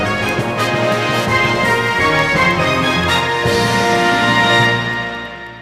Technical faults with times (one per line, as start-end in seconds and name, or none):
0.18-5.57 word clock ticks